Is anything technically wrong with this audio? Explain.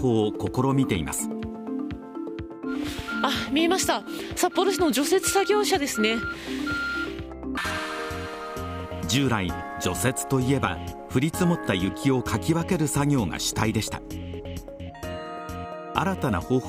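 No, nothing technical stands out here; the audio sounds fine all the way along.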